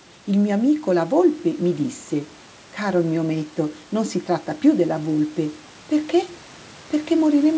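Nothing goes wrong anywhere in this one; the speech comes through a wideband call chain with the room noise sitting about 29 dB below it and the usual top end stopping around 8 kHz.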